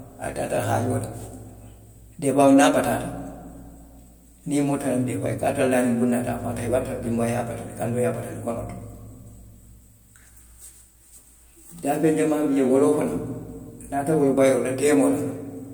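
No technical faults are audible.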